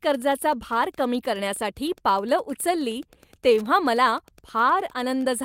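Throughout the speech runs Wi-Fi interference: a steady ticking about ten times a second, matching a nearby radio's 102.4 ms beacon being rectified by the audio circuit, roughly 30 dB below the speech. Its rigid, clock-like spacing sets it apart from random crackle or mains hum.

Also present the whole way is clock drift between sender and receiver. The sender's clock runs roughly 2% slow, so the receiver's jitter buffer keeps draining and must be topped up. Unlike packet loss, the disturbance is continuous and one-directional rather than isolated dropouts.

From 0.10 s to 5.22 s this shows up as repeated timing corrections. The receiver repeatedly inserts short repeated pieces, playing at 98% speed and adding about a tenth of a second overall. The slight hiccups fall unevenly, giving a faintly dragging tempo rather than one audible glitch.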